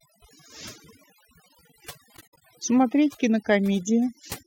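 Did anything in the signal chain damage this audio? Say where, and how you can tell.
Yes. Overdone noise removal at the call-processing stage affects the whole clip. Gaps between speech fall to near silence with twinkling specks. A spectrogram shows a near-black background with isolated flecks, and patchy, hollowed harmonics.

AAC frame loss with muting in the codec stage hits between 2.16 and 2.42 s. About 149 ms of sound drops out across that span, with the longest gap around 70 ms. The waveform fades smoothly to zero and back, and the spectrogram shows full-band blank slots with tapered edges.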